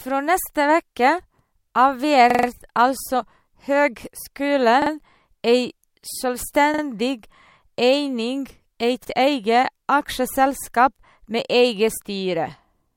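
Short stutters break the speech four times: a roughly 43 ms fragment plays four extra times from 2.30 to 2.48 s, twice more at 4.82 to 4.91 s and again at 6.74 to 6.83 s, and once more at 9.05 to 9.09 s, each repeat meeting the next with a hard join. This is a repeated buffer: fresh audio arrived late, so the device replayed its last block, which fits a 2048-sample buffer. Nothing appears to be skipped afterward.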